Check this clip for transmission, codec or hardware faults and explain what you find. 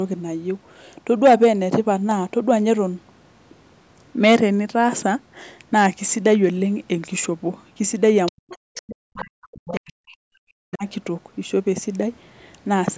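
Two echo-path faults appear between 8 and 11 seconds, with the band topping out near 8 kHz from the call microphone processing.

Other side's voice leaking through: brief second-voice scraps at 8.26–8.32, 8.49–8.56, 8.74–8.81, 9.17–9.24 and 9.66–9.79 s, roughly 15 to 25 dB below the speech, likely residual loudspeaker echo the canceller failed to remove.

Speech suppressed in double talk: from 8.31 to 10.85 s the main speech dips and drops out in pieces for about two seconds, at worst by roughly 40 dB, likely the echo canceller attenuating both sides during overlapping talk.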